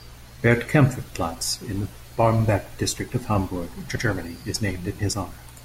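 A brief stutter at 3.95 s: the speech jumps back and replays the same 100 ms stretch, through 4.05 s, before carrying on. This is repeated frames. A short run of compressed frames, which fits about five frames, was written or delivered twice, so the decoder played that slice once more. The stretch is heard twice in all, and the extra pass makes the clip 100 ms longer than the original.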